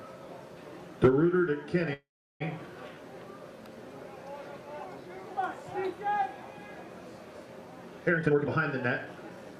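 At 1.93 to 2.42 s a call audio freeze: the sound stalls into a fading buzz, then about 360 ms of flat, empty waveform, likely from delayed packets draining the jitter buffer. From 8.17 to 9.59 s a jitter buffer speed-up plays the audio at 129% speed with unchanged pitch, cutting roughly 0.4 s. On a spectrogram, harmonics stay at the same frequencies while events crowd closer together.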